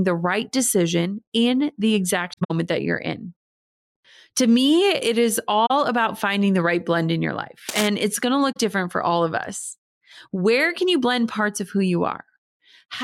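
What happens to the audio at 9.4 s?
Nothing goes wrong at 9.4 s; the speech there plays through intact, with no dropout, click or distortion.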